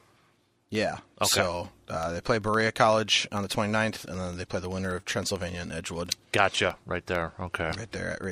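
From 0.11 s right through to 8.24 s there's a steady train of periodic USB or driver dropouts, one every 64 ms, so about 150 in all. Something on the USB bus or in the audio driver is stalling at a fixed interval, and each stall wipes out a tiny fraction of a millisecond of the speech, leaving a gap of silence. You hear it as an even ticking riding under the speech, present only where there's signal.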